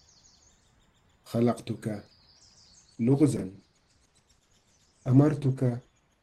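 At 1.09 to 1.14 s there's a quick jumbled blip. That's chunks out of order: one block of about 23 ms turned up a chunk late and played after the one that should have followed it. Nothing's missing, but the sequence is scrambled and you get three hard joins in under 50 ms. The block size fits a 1024-sample buffer at 44.1 kHz.

From 2.86 s to the end, the sound suddenly gets duller, with no gap. That's the adaptive stream dropping to a lower bitrate. The connection slowed and the player switched to a leaner version. Nothing above about 12.2 kHz survives, and codec artefacts thicken up. The character points to something like Opus stepping down from around 64 to 16 kbit/s.

Inside that stretch, at 3.37 to 3.41 s, the same chunks-out-of-order glitch hits again. Another roughly 23 ms block lands one chunk late, giving the same brief garble.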